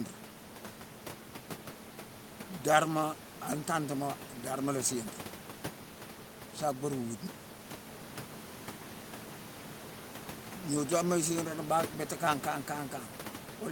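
No technical faults are audible.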